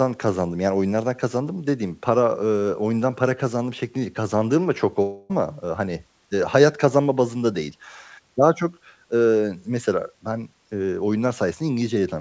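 At about 5.02 s the speech breaks off, and until about 5.3 s a buzzy, smeared repeat of the last sound fills the gap, fading without ever reaching silence. The audio then resumes with about 0.28 s of material simply gone. This is a long network dropout, likely from packets that never arrived, with the receiver's concealment covering the whole gap. A spectrogram shows blurred, repeating harmonics dimming over that span. The waveform shows a periodic, shrinking envelope and then an abrupt restart. Throughout the clip, content stops at 8 kHz, in line with the G.722 call codec.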